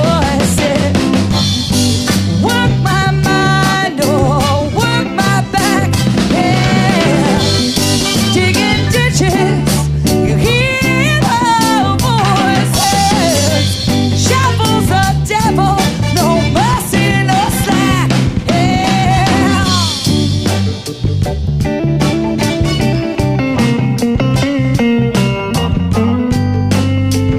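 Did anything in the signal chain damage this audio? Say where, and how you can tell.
Yes. The converter stage is at fault: its sample clock wanders, so each sample is captured slightly early or late, with timing errors of around 2 microseconds. That shows up as sample clock jitter across the whole clip, a hiss and grittiness sitting roughly 35 dB below the sound. Because the error scales with how fast the waveform is changing, the roughness swells on loud, bright passages and disappears when the audio goes quiet.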